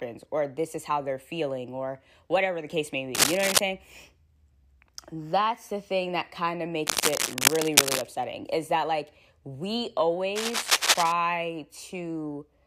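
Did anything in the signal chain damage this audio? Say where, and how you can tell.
Yes, in the analogue wiring. Cable scratch noise sits about 5 dB above the speech at 3.15–3.59 s after "whatever the case may", 6.86–8.03 s after "thing that kind of", and 10.35–11.12 s after "is that like we", as dense, ragged rustling, likely from a worn connector whose contact resistance jittered as it moved.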